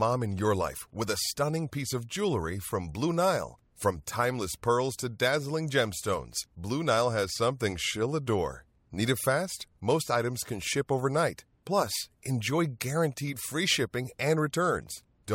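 No technical faults can be heard anywhere in this speech recording. Nothing in it drops out, breaks up or distorts at any point.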